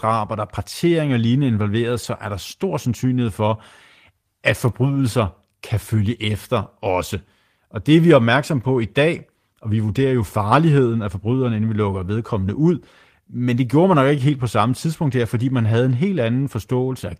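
At 2.03 s there's a lost packet rebuilt from error correction: the next packet's low-bitrate copy filled the 20 ms gap, so the speech turns briefly rough and noisy instead of dropping out.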